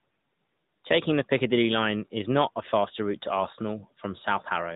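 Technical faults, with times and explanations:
Throughout: AMR narrowband mobile codec. Nothing above 4 kHz survives, and the sparse-pulse vocal-tract model gives a plainly audible buzzy, synthetic edge, consistent with roughly 10.2 kbps.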